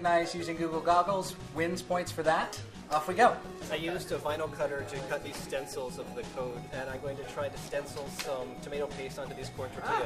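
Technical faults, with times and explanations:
5.08 s and 9.79–9.81 s, compressed frames skipped: the audio jumps forward by roughly 70 ms, then roughly 50 ms, which suggests a few whole coded frames were lost or rejected by the decoder.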